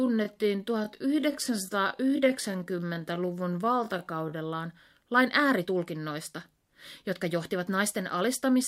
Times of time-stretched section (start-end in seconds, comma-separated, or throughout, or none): 0.00-4.32